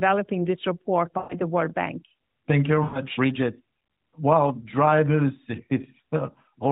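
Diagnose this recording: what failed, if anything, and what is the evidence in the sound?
Lost AMR speech frames on the radio link. After "this report" (1.18 to 1.36 s) and "you very" (2.84 to 3.02 s), the sound smears and fades. The 120 ms and 100 ms losses fit six and five 20 ms frames. The decoder repeated old pitch and vocal tract settings with falling gain.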